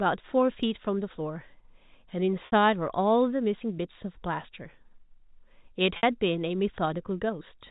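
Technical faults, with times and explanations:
2.46 to 2.52 s and 5.97 to 6.03 s: packet loss with pitch repetition. Each 60 ms gap sounds like a brief held, buzzy tone where the speech should keep moving. The tone fades, and the speech returns through a short cross-fade. Packets went missing, and the receiver filled each hole by repeating the last pitch period and fading it over about 50 ms. A 60 ms gap fits two consecutive lost packets. The clip is carried in G.711 telephone coding throughout, so nothing above 4 kHz passes.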